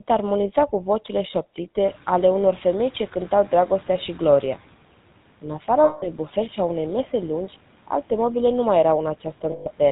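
The speech has a buzzy, gravelly roughness throughout, with nothing above 4 kHz. That points to the GSM full-rate codec at around 13 kbps, which rebuilds the voice from a vocal-tract model driven by a sparse pulse excitation and discards the upper band.

Around 2 s the room noise jumps by about 18 dB. From 1.85 to 4.58 s it comes through with less reduction than it should, then gradually sinks by about 8 dB. This is the noise suppressor catching up: its noise estimate took about 2.7 s to adapt to the new level.

From 5.84 to 6.08 s, just before "bufet și a unei", the sound freezes into a rough, metallic ring for 180 ms. The same happens from 9.52 to 9.67 s, lasting 140 ms. These are lost GSM frames, where the decoder repeats the last good frame's settings at a falling level.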